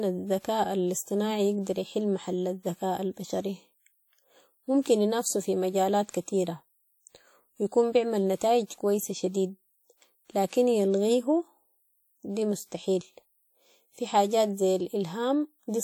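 Throughout the speech, a washy, ringing smear with hiss that breathes along with the voice, likely WMA compression at a low bitrate, fitting roughly 48 kbps.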